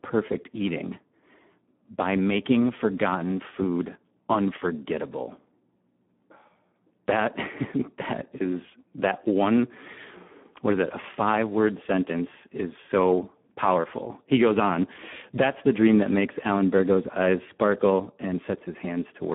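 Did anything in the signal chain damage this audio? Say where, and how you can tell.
Yes. The codec stage damaged it: heavy Speex coding runs through the whole clip. The speech is hoarse, noisy and edging towards robotic, which fits roughly 8 kbps. The band is narrowed to about 150 Hz to 3.5 kHz, with nothing above 3.8 kHz. Too few bits reach the excitation.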